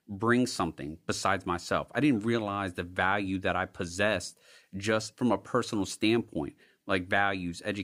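A short stretch of speech with nothing technically wrong to point at anywhere in it.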